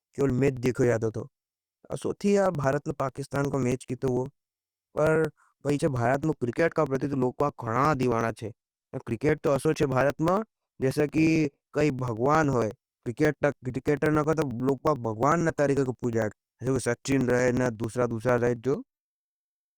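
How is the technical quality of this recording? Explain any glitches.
The speech carries periodic USB or driver dropouts from 0.12 to 19.64 s. Every 0.09 s, roughly 10 ms is skipped, giving steady ticks wherever sound is present.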